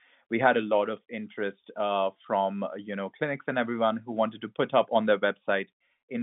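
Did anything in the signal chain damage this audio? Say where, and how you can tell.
No, none of the stages along the chain has left any damage in this speech. What can be heard is ordinary G.711 telephone coding, with the line band running from about 150 Hz to 3.6 kHz and nothing above roughly 3.7 kHz.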